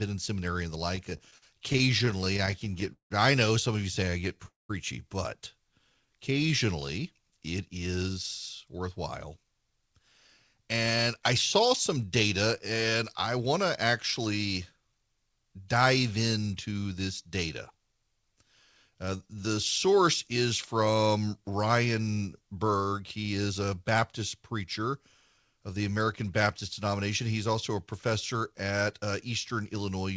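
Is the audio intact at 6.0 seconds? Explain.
No. From 5.74 to 6.67 s the speech drags at 93% speed, drawn out but at unchanged pitch. This is a jitter buffer slow-down: with its reserve running short or its target delay just raised, the receiver repeated single pitch periods or bits of pauses to build a reserve, adding 72 ms.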